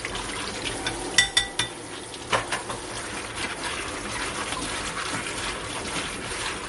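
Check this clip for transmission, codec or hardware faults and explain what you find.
One codec fault is present throughout the clip, most likely MP3 compression. For the whole 6.7 seconds, nothing sounds above 11.2 kHz, and the damage is plainly audible. The encoder ran short of bits, which fits roughly 48 kbps, so it cut the treble and dropped weak frequency lines frame by frame. That gives a watery, swirly texture with smeared attacks. A spectrogram shows a hard ceiling at 11.2 kHz with flickering holes beneath it.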